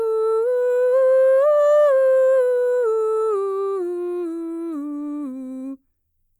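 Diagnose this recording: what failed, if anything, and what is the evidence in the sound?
Nothing failed: no stage from wiring and conversion through to playback leaves an audible defect in the music.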